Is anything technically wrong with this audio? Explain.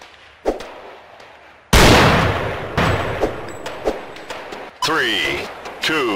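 Yes. From 2.78 to 4.70 s the sound is heard twice: a second, equally loud full-band copy trails roughly 0.7 s behind, with no decay, and cuts in and out abruptly. This doubled audio track is likely a second capture through a slower path.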